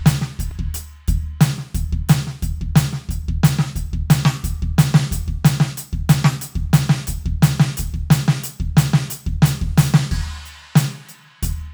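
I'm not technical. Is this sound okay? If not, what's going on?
No. The music has two tiny clicks, at 0.51 s and 9.10 s. Each is a repeated buffer: fresh audio arrived late, so the player replayed its last sliver of about 3 ms, twice at 0.51 s and once at 9.10 s.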